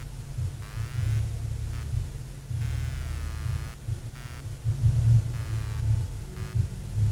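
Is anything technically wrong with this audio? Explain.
Yes. Running through the whole clip is a buzzy, chirping pulse at around a hundred pulses per second, sitting roughly 25 dB below the wanted sound, and it flickers with something other than the audio itself. That is computer activity noise: as the processor, graphics card or mouse draw changing current, the ground shared with the audio circuit shifts, and those load swings leak into the signal as this rhythmic scratchy buzz.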